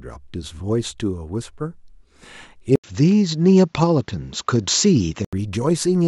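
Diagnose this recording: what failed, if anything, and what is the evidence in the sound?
At 2.76 s an 80 ms dropout, then nothing above 7.6 kHz and faint new hiss until 5.33 s: likely the driver's input switched to a poorer device.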